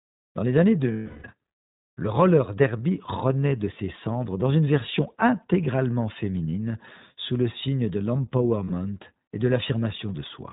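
The whole clip is band-limited by the iLBC codec. Nothing above 4 kHz survives. Each short frame is coded on its own, and the speech comes out clear but slightly rough and synthetic. The damage is plainly audible, which fits 20 ms frames at about 15 kbps.

From 0.92 to 1.26 s, right after "dans les années", there are lost iLBC frames. The decoder repeats the last pitch cycle with noise, giving a held, buzzy vowel that fades. At 8.64 to 8.72 s, just before "et de", a shorter loss buzzes briefly, then the voice is right again almost at once.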